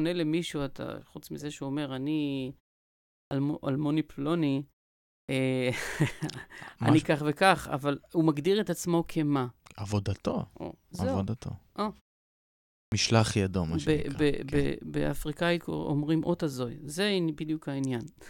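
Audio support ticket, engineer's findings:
Clipped start after a pause, three times: 3.25 s (after about 0.7 s of silence, roughly 60 ms lost), 5.22 s (after about 0.6 s, roughly 66 ms lost), 12.86 s (after about 0.9 s, roughly 61 ms lost). Speech comes back abruptly, first sounds missing. Points at the output device dozing off in the gaps and needing a beat to wake or relock before audio passes again.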